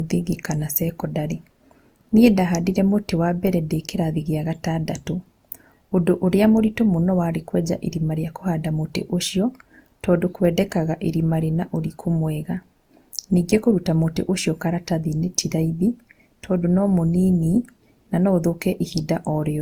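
Generation loss runs throughout the speech, most likely from repeated lossy coding, about five passes through Opus at roughly 64 kbit/s. Each re-encode requantises on a shifted frame grid, so artefacts compound into a swirly, hollow, smeared sound with softened attacks, with nothing above 20.2 kHz.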